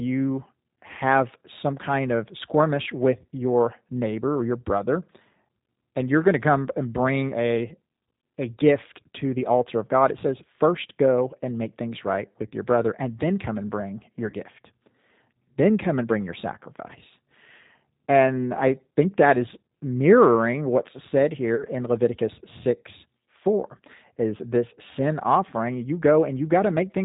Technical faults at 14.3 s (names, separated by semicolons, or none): G.729 codec; VoIP packet loss concealed by the speech codec